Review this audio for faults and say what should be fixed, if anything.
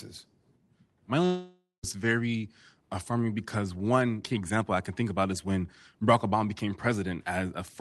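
Long network dropout, 1.25 to 1.85 s: the speech breaks into a fading, buzzy continuation of the last sound, then 0.19 s of silence, and resumes with 0.58 s of speech missing. This is likely lost packets that the Opus receiver had to conceal. Preventing it means steadying the network link and enabling Opus in-band forward error correction so that short losses can be rebuilt.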